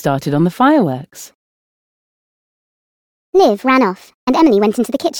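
From 1.31 s to the end, the audio plays as a section at the wrong speed, running 1.35 times faster than it should, most likely because that stretch was fitted to the wrong clock. Pitch rises with the tempo, by roughly five semitones, so the sound turns high and hurried all at once. On a spectrogram every harmonic shifts upward and compresses in time at that boundary; the waveform's cycles visibly tighten.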